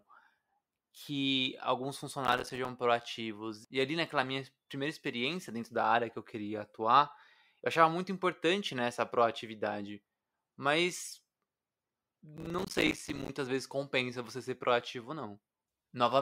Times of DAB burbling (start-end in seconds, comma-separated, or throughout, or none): none